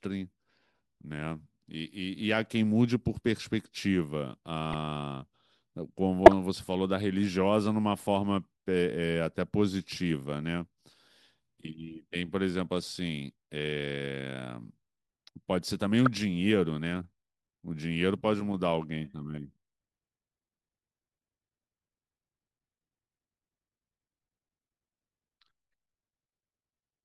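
Brief chirps and blips of wrong-frequency noise sound at 4.73 s, from 6.26 to 6.33 s (loudest, near full scale) and at 16.06 s. Each is a corrupt frame decoded: damaged frames were played anyway.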